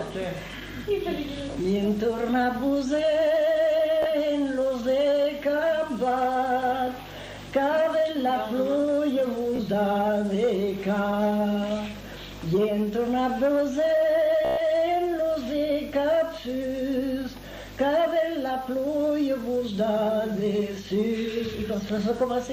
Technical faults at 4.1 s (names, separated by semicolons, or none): Bluetooth stutter